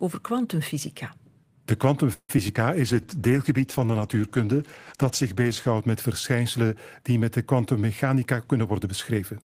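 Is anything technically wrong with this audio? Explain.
Yes. Four network-related faults affect this speech clip.

From 2.13 to 2.57 s there is repeated packet loss, which produces a robotic sound. Four gaps occur, the longest about 156 ms. The receiver concealed them by extending the preceding sound, covering 176 ms in total, while 60 ms was simply lost. About 40 percent of that stretch is synthetic, which makes it choppy, with pieces missing.

Between 2.82 and 3.08 s the jitter buffer slows the audio down. The receiver built up its reserve by repeating pitch periods, adding 41 ms, so playback runs at 88 percent speed. The pitch stays the same while the sounds are drawn out.

From 2.84 to 5.77 s there is a call bitrate drop. The bandwidth estimate fell and the encoder went from 32 kbps to 13 kbps, staying at the lower rate for about 2.8 s. The coarser coding and the lost high frequencies make the speech rough and muffled.

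From 8.03 to 9.57 s the jitter buffer speeds the audio up. An excess of buffered audio was trimmed by removing short pitch-period segments, roughly 150 ms in total. Playback runs at 108 percent speed with the pitch unchanged, and the delivery sounds hurried.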